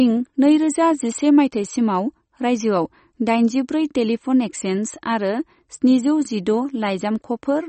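MP3 compression damage runs through the whole speech recording, with nothing above about 8.4 kHz and a watery, swirling texture in the upper range. The likely cause is a starved encoder, consistent with a low bitrate around 32 kbps, cutting the treble and dropping weak spectral detail that flickers between frames.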